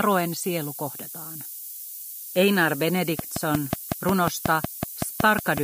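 A steady, thin hiss sits under the sound from start to finish, rising sharply toward the top of the band and only about 10 dB below the signal. This is low bit depth with noise shaping, consistent with a 6-bit signal whose rounding error is pushed into high frequencies.

From 3.19 s to 5.59 s, a regular ticking cuts through at 5.46 clicks per second, about fifteen alike pops standing well above the sound. This train of clicks is likely caused by interference from nearby equipment or a faulty connection or power supply.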